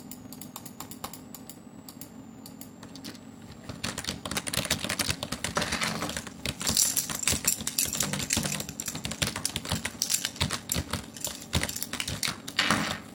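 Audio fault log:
throughout: block size mismatch (padded). Zero-filled gaps end every block, giving a 46.9 Hz buzz consistent with 1024-sample reads; the audio plays at 0.861 speed, near its normal pitch.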